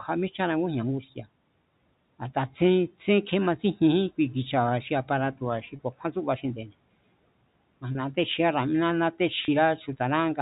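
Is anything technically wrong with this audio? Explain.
Yes, there are two kinds of fault.

Between 1.02 and 1.26 s there is speech cut by the noise suppressor. The suppressor misjudged part of the speech as background and pulled it down along with the room noise, by about 11 dB at the deepest point. Roughly a tenth of a second of sound within that span is affected. The soft portions sound swallowed and faint, dipping briefly before the level recovers.

Packet loss with pitch repetition occurs three times, each gap about 30 ms long, which fits a single lost packet: 5.76 to 5.79 s, between "xi aparato̱ba̱ xi" and "ku̱a̱kjúán tsúba"; 7.92 to 7.95 s; and 9.45 to 9.48 s. In each gap the receiver filled in by repeating the last pitch period and letting it fade. Because the gaps are short, each one is heard as a brief held, buzzy tone in place of the missing sound, not as a silence.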